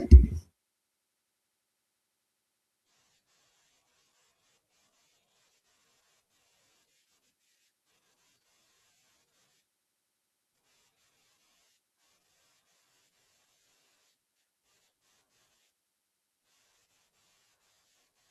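From 12.73 s to the end, the speech carries a block size mismatch (padded). Each block arrives short and is zero-filled, so a gap recurs 100 times a second, heard as a 100 Hz buzz. Delivery slows to about 0.92 of normal speed, timbre intact.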